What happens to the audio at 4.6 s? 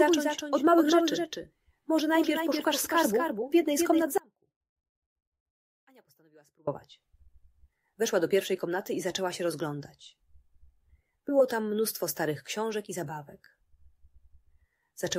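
At 4.6 s the sound is inside an audio dropout to a faint residue. It runs from 4.18 s to 6.67 s, about 2.5 s. The signal cuts out abruptly, not as a fade or a natural pause. What remains is a faint leak of the sound, roughly 30 dB below its normal level. The likely cause is a loss of the wanted signal while the path downstream stayed live. Full level returns just as suddenly at 6.67 s.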